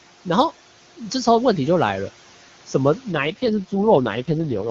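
A speech recording carries noise suppressor artifacts from start to finish. The suppressor pulls the room noise down by about 12 dB in the pauses and lets it rise again under the speech, so the background seems to breathe in and out. On a spectrogram the low-level noise floor thins out between phrases and fills back in beneath each syllable. In the waveform the gaps between words look unnaturally clean compared with the noise riding under the speech. The room noise itself, about 19 dB below the speech, is ordinary background and not a fault. From 3.12 s to 4.69 s an AMR rate drop sets in. The voice turns rough, buzzy and synthetic while the bandwidth stays unchanged and nothing drops out, which fits the AMR wideband codec being ordered down from 23.85 to 6.6 kbit/s, likely to protect the bits on a weak radio link. On the spectrogram the band still reaches 7 kHz, but the harmonics blur into coarser, smeared bands above the low formants, and the top region looks like flat noise rather than structured speech.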